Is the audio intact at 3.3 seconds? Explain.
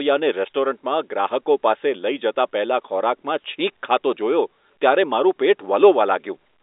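Yes, the audio is intact at 3.3 seconds, with the speech coming through the telephone band as G.711 telephone coding normally carries it.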